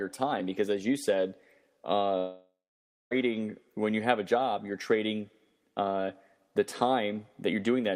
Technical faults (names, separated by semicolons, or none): long network dropout